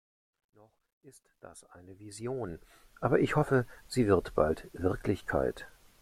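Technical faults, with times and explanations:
0.00–3.21 s, truncation distortion on a fade: the fade-in drops low bits without dither, fitting a 12-bit stage, so quiet sound turns gritty, worst until 1.43 s, before "ich hoffe sie wird".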